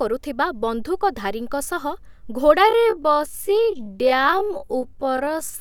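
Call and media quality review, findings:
Time-stretched section, 2.61 s to the end: speech abruptly drops to about half pace (0.51x) while pitch holds steady. Likely a time-stretch step in the processing chain, padding the tail to a target length by repeating small slices rather than resampling. Pitch is preserved, hence no drop in tone, just the drag.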